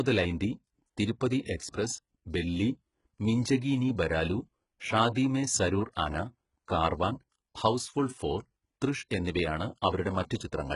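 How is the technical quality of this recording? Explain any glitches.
The technical quality is poor throughout the speech. Its s sounds turn gritty and metallic, with nothing above 11.1 kHz: likely HE-AAC compression near 12 kbps, faking treble from copied lower bands.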